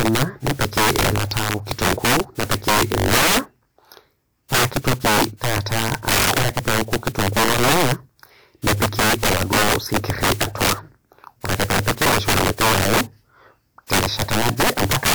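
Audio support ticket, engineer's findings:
Integer overflow, throughout the speech. Loud syllables break into cracks and a tearing buzz, sharper than clipping. Probable component: an integer gain or mix stage with no saturation. Signal is driven about 17 dB past the integer limit, so roughly one sample in fifteen wraps to the opposite sign and jumps across the full range instead of being held at the limit. Fix: clamp before the conversion.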